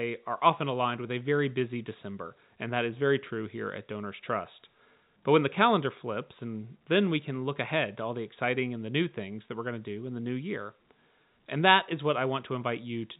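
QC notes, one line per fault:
Nothing here needs flagging, and the speech comes through the telephone-band G.711 path just as that line should sound.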